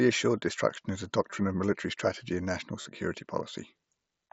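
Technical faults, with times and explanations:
1.3 s and 2.82–2.86 s, concealed Bluetooth headset packet loss: headset voice packets dropped after "assured destruction is a" (15 ms) and after "military strategy and national" (about 40 ms), and the receiver repeated recent waveform to fill each gap. Each holds a brief buzzy tone before real audio resumes with a slight warble, over the band-limited mSBC headset audio.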